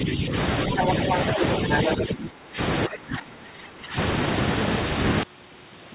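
Speech on a call. The talker's level is pulled down from 0.0 to 0.34 s, 1.97 to 2.59 s and 2.87 to 3.97 s, by up to about 20 dB. This is speech suppressed in double talk, likely caused by the echo canceller ducking both voices at once. The other side's voice leaking through is heard at 0.77 to 0.93 s, 1.09 to 1.19 s, 1.41 to 1.45 s and 1.72 to 1.94 s. It is mostly as loud as the talker, and likely comes from residual loudspeaker echo.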